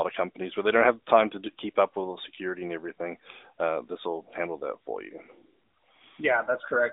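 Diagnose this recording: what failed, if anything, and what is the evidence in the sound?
Nothing failed; the recording shows no faults.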